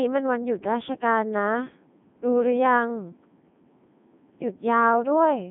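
Throughout, the speech passes through a Codec 2 vocoder at 3.2 kbit/s. Only pitch, voicing, energy and a spectral envelope survive, so it sounds robotic and buzzy, with nothing above 3.8 kHz.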